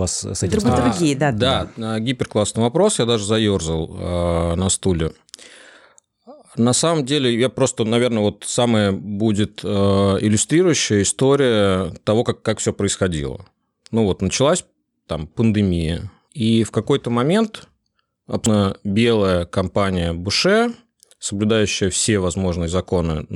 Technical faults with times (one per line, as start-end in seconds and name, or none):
18.46 damaged data in a compressed stream